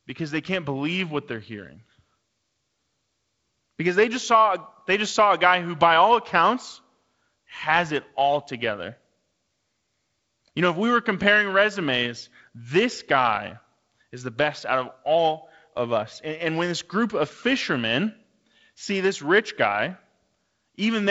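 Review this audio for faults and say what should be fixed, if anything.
No faults needing a fix turn up in this speech recording. What comes through is the character of G.722 wideband telephone coding, with nothing above about 7.7 kHz and a light coding hiss that fits its lowest 48 kbit/s mode.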